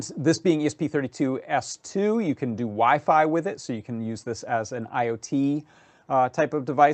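Nothing technically wrong can be heard anywhere in the audio. It has passed through a WebRTC call path, and its content stops at about 8 kHz, which fits Opus coding at roughly 32 kbps.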